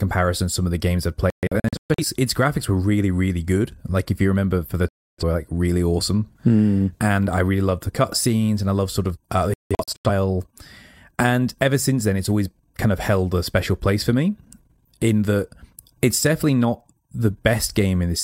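Speech broken by digital broadcast dropouts at 1.30–2.04 s (after "of the games I've"), 4.89–5.24 s and 9.54–10.10 s: the receiver mutes clean to silence, in short scattered holes in the first and third, not the smeared, warbling fill of packet-loss concealment.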